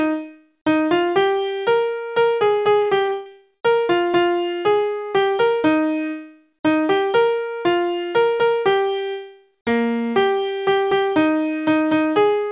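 From 2.82 to 3.62 s the sound turns choppy and robotic, with pieces dropping out of a band already capped at 4 kHz by the call codec. This is repeated packet loss: eight gaps, the longest 122 ms, each patched by extending the previous sound, concealing about 40% of the stretch.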